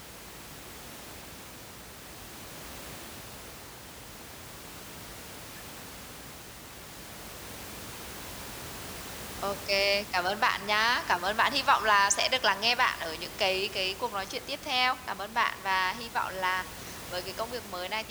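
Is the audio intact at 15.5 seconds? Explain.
Yes, the audio is intact at 15.5 seconds, with only the room's own background noise audible about 15 dB below the speech.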